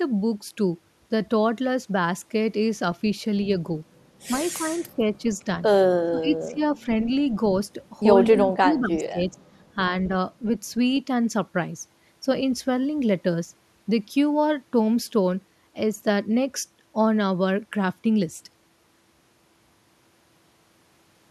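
A speech recording in which the talker's level sinks by roughly 10 to 20 dB at 4.49–5.04, 6.04–6.61, 8.31–8.41 and 8.6–9.39 s. This is likely speech suppressed in double talk, as the echo canceller ducks the voice while the far side talks, unlike a network dropout's abrupt silence. At 8.42–8.47 s a faint echo leak follows, a copy delayed by 250 ms and about 25 dB below the speech. That is likely loudspeaker pickup the canceller missed, and its delayed, repeated character sets it apart from room reverberation.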